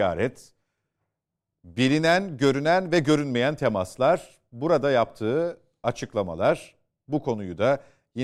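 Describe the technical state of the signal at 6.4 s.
At 6.4 s the speech signal is intact, with no audible technical fault at that moment.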